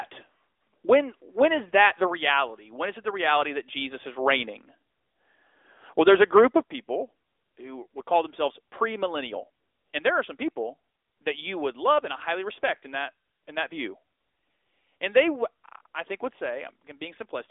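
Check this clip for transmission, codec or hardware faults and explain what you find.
Two faults are present: a narrowband mobile codec throughout, and one small level drop near the start.

The AMR narrowband mobile codec runs the whole clip. Nothing above 3.7 kHz survives, and the line band sits between 300 Hz and 3.6 kHz. The speech is rebuilt from a vocal-tract model fed by sparse pulses. That gives a plainly audible buzzy, synthetic edge, which fits a mid-rate mode near 10.2 kbps.

At 2.4 s the speech and background drop together by about 1 dB. The change is a single sudden step, not a fade. The likely cause is call software stepping the microphone volume down. The drop is small.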